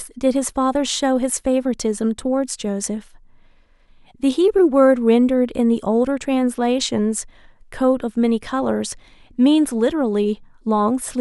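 Speech recording; no technical faults can be heard.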